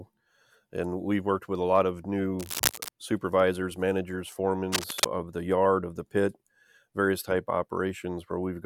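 Cable scratch noise occurs from 2.39 to 2.89 s and again from 4.72 to 5.05 s, heard as harsh, uneven rustling over the speech, first a few decibels below it, then about as loud. A loose or worn connector being moved is the likely cause.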